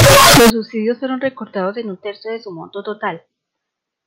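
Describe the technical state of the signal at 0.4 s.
At 0.4 s the speech sits inside a float read as integer fault running from 0.0 to 0.5 s, just before "subsidios sólo fueron recortados". The waveform turns nearly square at an almost fixed, high level. It sounds very loud and harsh, with background noise as loud as the voice. The likely cause is 32-bit float samples read as 32-bit integers, so sign and exponent bits set the level.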